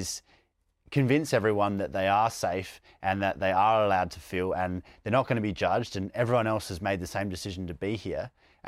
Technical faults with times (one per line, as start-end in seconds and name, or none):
none